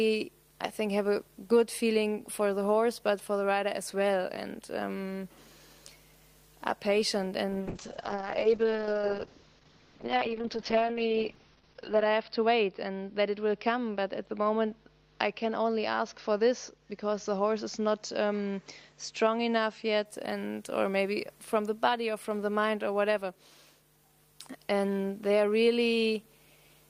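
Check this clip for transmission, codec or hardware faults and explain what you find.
One fault: a call bitrate drop from 7.6 to 20.11 s. Top end narrows from 20 kHz to 6 kHz, turning the sound muffled and watery, consistent with roughly 32 falling to 7 kbps. It stays continuous, unlike packet-loss gaps.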